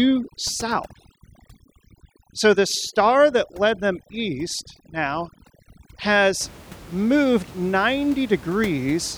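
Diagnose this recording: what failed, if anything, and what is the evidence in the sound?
Overdone noise removal in the call processing stage, from 0.0 to 6.41 s, muted bands near its noise estimate, leaving the room noise, about 21 dB down, as twinkling near-silence.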